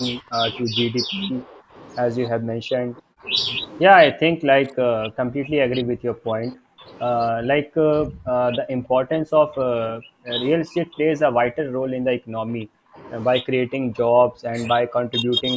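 Speech through call microphone processing, with repeated dips and dropouts at 0.2–0.41, 0.63–1.75, 2.29–3.28, 4.11–6.89, 7.32–10.29, 10.57–13.02, 13.41–14.57 and 14.8 s to the end. The first two dips are shallow, about 20 and 15 dB. From 2.29 s the level falls by about 40 dB, cutting the talker out in pieces. This is likely speech suppressed in double talk: the echo canceller cannot tell the near talker from loudspeaker echo while the far side speaks, so it attenuates both.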